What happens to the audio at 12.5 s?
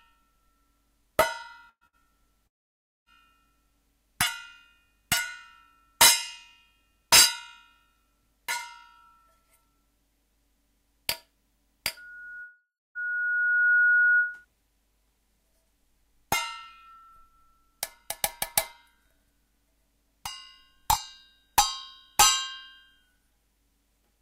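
A loudspeaker feedback squeal runs from 11.97 to 14.45 s: the microphone re-captures its own speaker output, so a 1.4 kHz tone swells over about two seconds to about 5 dB above the audio.

Inside that squeal, a long network dropout from 12.42 to 12.98 s removes about 540 ms of audio, likely from lost packets. The gap is filled with a fading continuation that leaves about 310 ms of near silence, and the audio then resumes with that stretch missing.

The squeal grows steadily louder at a single pitch, while the dropout decays away and then jumps ahead.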